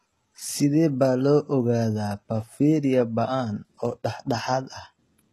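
Throughout the speech, the treble sounds synthetic: s sounds come out gritty and metallic, with nothing above 12.4 kHz. This is likely HE-AAC compression at a low bitrate around 16 kbps, rebuilding the upper band by copying lower harmonics upward.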